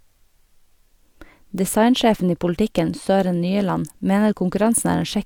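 No technical faults are audible at any point in this speech recording.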